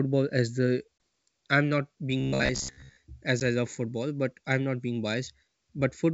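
Right after "as the", at 0.98 to 1.00 s, there's packet loss on the ADPCM call: a 20 ms hard-edged gap, which fits roughly two lost packets. The decoder's predictor and step size drift out of step with the sender's, so "I'm not" comes back slightly distorted, with grit, before settling a few tens of milliseconds later. The G.722 wideband coding underneath keeps its clear top end throughout.

From 2.20 to 2.97 s, before "as I love football", the speech turns into a rigid metallic buzz at about 66.7 Hz. That's robotic sound from repeated short buffers. The period points to a roughly 15 ms chunk being replayed, with most of the real audio in that stretch skipped. The likely cause is audio arriving too seldom, so the software loops what it last had.

At 3.40 to 3.42 s there's a second ADPCM packet-loss hole, 10 ms of missing audio from what sounds like a single packet. The same brief distortion follows as the decoder recovers going into "I love football but".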